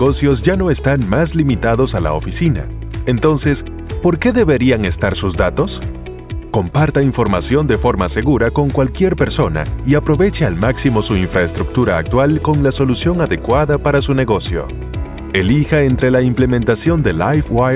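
No technical faults can be heard anywhere in the audio. There is nothing in it that calls for a timestamp or further comment.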